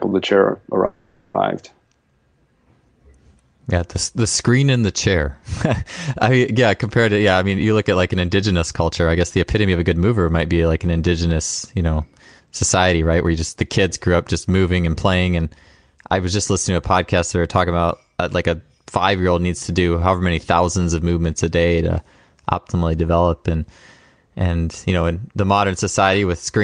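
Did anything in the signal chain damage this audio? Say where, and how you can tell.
Yes. Right after "the chair", from 0.85 to 1.36 s, the speech stops and the last sound carries on as a fading buzz or hiss for about half a second (490 ms). The speech then resumes exactly where it broke off, with nothing lost. This is most likely a call audio freeze at the network and jitter-buffer stage. Packets arrived late, the buffer ran dry, and the receiver extended the final sound until the audio caught up. That pause adds about 490 ms of delay.

The same buffer then shows jitter buffer speed-up. From 7.09 to 10.05 s, between "I yeah compared" and "might be like an", the speech sounds rushed at an unchanged pitch, running about 11% fast. It happens again from 12.25 to 13.32 s, after "an indigenous you know" and before "just the kids grew", at about 9% fast. The receiver was trimming pitch-period slices to work off its surplus delay: roughly 300 ms in the first stretch and about 100 ms in the second. 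Throughout, the Opus call codec's top end stops near 12 kHz.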